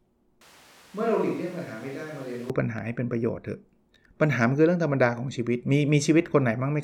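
From 0.41 s to 2.50 s the speech suddenly turns roomy and hollow, loses its low end, and drops by roughly ten decibels, while background noise rises to only around 25 dB below the speech. It switches back just as abruptly. This is likely a switch to a distant microphone, with the close microphone's signal lost. A simple gain drop would leave the tone unchanged, and added reverb would not thin the bass or bring up the room noise.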